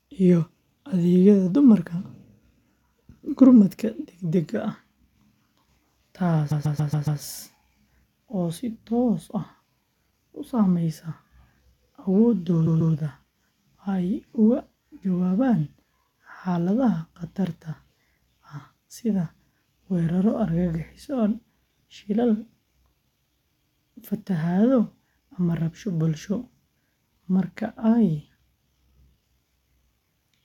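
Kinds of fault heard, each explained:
Repeated frames: a block of compressed frames, which fits a run of six, was decoded more than once. A 139.3 ms slice of speech stutters back to back, most at 6.50 s, and each repeat lengthens the clip. Unlike a dropout, nothing is lost.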